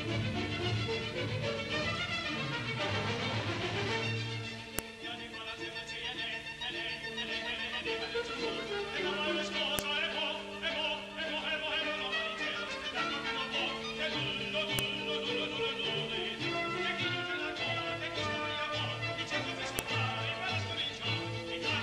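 File header played as audio, at 4.79, 9.79, 14.79 and 19.79 s: a sharp, loud click lands every 5 s, regardless of what the sound is doing at that moment. The audio arrives as separate 5-second pieces joined end to end, and each piece still carries its WAV header. Those few dozen bytes of file metadata are read as samples, so each join produces a brief burst of arbitrary values that snaps out of the signal.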